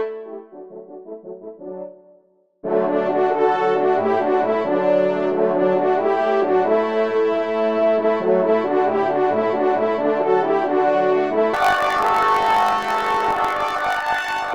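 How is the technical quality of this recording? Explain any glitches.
The recording has one clear fault near the end. From 11.54 s to the end, planar audio is read as interleaved: each 20 ms block plays twice at double speed, giving a robotic 50 Hz buzz. On a spectrogram this appears as harmonics shifted an octave up and chopped into regular 20 ms segments.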